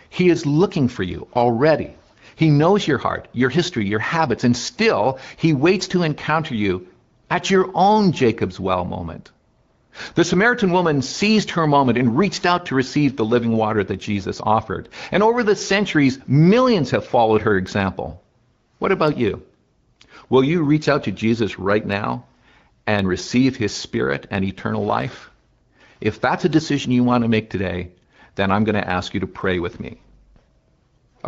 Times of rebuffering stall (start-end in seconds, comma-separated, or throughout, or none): none